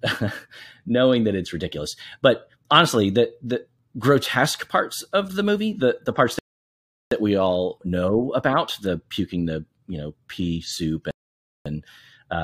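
The speech drops abruptly into silence at 6.39 s for about 0.73 s and again at 11.11 s for about 0.55 s, then picks up exactly where it stopped with nothing missing: rebuffering stalls, where playback ran dry of downloaded audio and paused until more arrived.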